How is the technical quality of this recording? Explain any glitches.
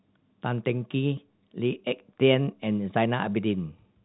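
No glitches or faults heard.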